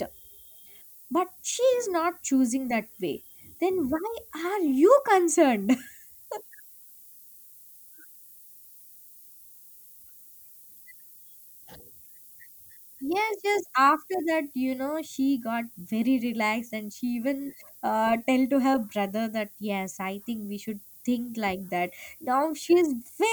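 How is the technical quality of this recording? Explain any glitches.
The quality is poor throughout because of a single persistent fault. The speech carries low bit depth with noise shaping for the whole recording: sampled at about 8 bits, with the rounding error fed back so it piles up at high frequencies. It sounds like a steady, thin hiss, roughly 20 dB below the speech, rising sharply toward the treble. A spectrogram shows a constant noise floor brightening toward the top band.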